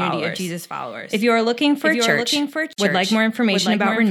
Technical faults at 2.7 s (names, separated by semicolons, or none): doubled audio track; gap at a join of encoded pieces